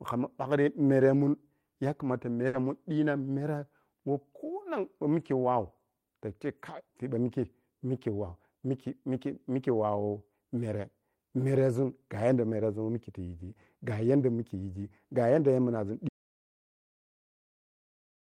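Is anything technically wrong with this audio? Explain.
Yes. From 2.47 to 2.56 s there is a burst of packet loss. About 60 ms of the preceding sound is stretched and faded, then audio skips ahead to "mun dii na mwere". That concealment tail, not silence, distinguishes it.

From 16.09 s to the end, after "yigi gayanda weh yamnazun", an audio dropout to silence leaves silence with no room tone, likely from a lost or muted input.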